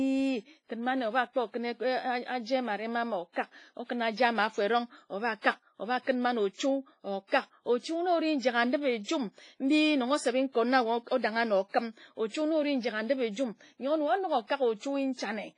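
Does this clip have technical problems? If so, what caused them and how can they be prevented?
Yes. The audio was likely passed through a heavily compressed WMA-style transform codec, which fits an early encoder running at a low bitrate of around 24 kbps. Its quantisation noise smears across long blocks, so the speech sounds ringing and washy, with hiss that rises and falls with the signal and nothing above 10.5 kHz. Encoding at a higher bitrate with a modern codec, or keeping a lossless copy, would prevent this WMA compression damage.

Pre-echo occurs at 5.41 to 5.44 s and at 7.27 to 7.32 s. Sharp attacks land late in transform blocks, and noise sized for the loud onset spreads backward into the quiet moment before it. Each attack is preceded by a brief hiss of about 31 ms and 49 ms respectively and sounds softened. A codec with short-block switching for transients, or a higher bitrate, would prevent this.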